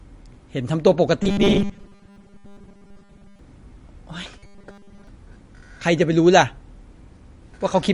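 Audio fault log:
throughout, MP3 compression: speech sounds watery and swirly; likely a low-bitrate MP3 around 40 kbps, spectrogram shows a hard treble ceiling and flickering gaps.
1.23–3.39 s and 4.39–5.07 s, robotic sound from repeated short buffers: a rigid 200 Hz metallic buzz, with much of the sound replaced by repeats, likely from a 5 ms buffer being looped; waveform shows identical repeating cycles, spectrogram evenly spaced harmonics.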